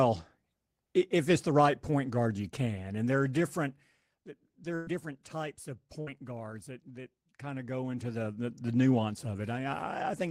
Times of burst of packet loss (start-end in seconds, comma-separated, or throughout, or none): 4.75-4.90, 6.01-6.10